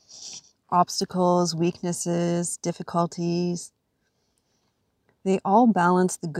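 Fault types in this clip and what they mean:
No technical faults can be heard in this recording.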